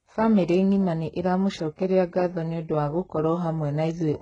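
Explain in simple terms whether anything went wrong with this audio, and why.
Yes. Throughout the speech, s sounds turn gritty and metallic, with nothing above 11 kHz. Heavy HE-AAC compression is the likely cause, rebuilding treble from copied lower sounds.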